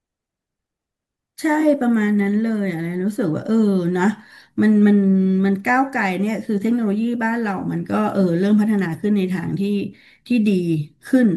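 At 1.60 s, running to 1.63 s, there's a brief AAC frame loss with concealment. Roughly 21 ms of the stream went missing, which fits a single dropped frame, and the decoder patched the hole by reusing the last good spectrum rather than leaving a gap. Because the loss is so short, you don't get a dropout to silence, just a quick smeared, noisy or phasey blip in the speech.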